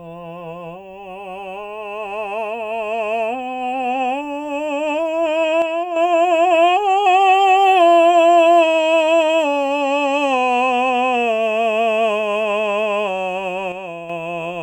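Music, with two brief level dips. From 5.62 to 5.96 s and again from 13.72 to 14.10 s, the sound drops abruptly by about 6 dB, then returns. The likely cause is one channel dropping out, halving what both stereo sides shared.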